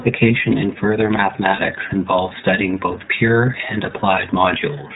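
Throughout, the speech carries the iLBC codec's narrowband sound: nothing above 4 kHz survives, so sibilants are dull, and the voice has a plainly audible rough, slightly synthetic grain. That grain fits the 13.33 kbps mode with 30 ms frames. Unlike the smeared, watery artefacts of a low-bitrate transform codec, the damage here is a rough, synthetic texture.

From 1.56 to 1.6 s, just before "involves studying both pure", lost iLBC frames briefly replace the speech. The decoder fills the gap by repeating the last pitch cycle mixed with noise, so it sounds like a short held, faintly buzzy vowel rather than silence or a click. The gap lasts about 30 ms, consistent with one frame. Because iLBC frames decode independently, the voice is right again almost at once.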